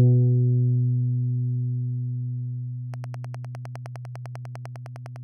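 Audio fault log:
2.94–5.17 s train of clicks: likely interference or a faulty connection injecting regular pulses at 9.9 per second, giving about twenty even ticks roughly 5 dB above the sound.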